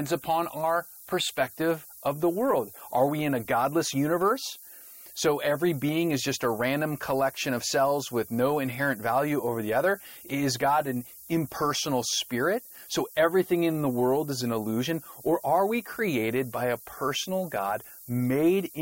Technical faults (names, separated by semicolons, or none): low bit depth with noise shaping